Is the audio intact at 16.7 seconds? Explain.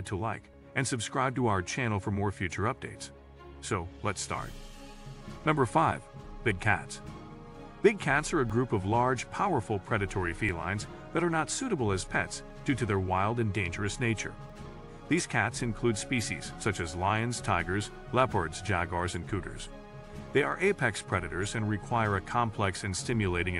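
Yes, the audio is intact at 16.7 seconds, with no fault present at that moment.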